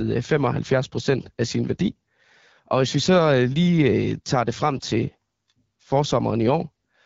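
Throughout, AMR wideband (HD Voice) coding turns the speech rough and raspy, which fits a low mode near 8.85 kbit/s. Unlike narrowband coding, a hissy top band extends to 7 kHz.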